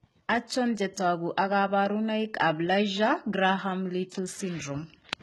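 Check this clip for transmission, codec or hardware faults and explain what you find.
One codec fault runs through the whole speech clip. Throughout, s sounds turn gritty and lispy, likely from HE-AAC compression copying lower bands upward, which fits about 16 kbps. A spectrogram shows repeated-looking upper bands cut off at 11.8 kHz.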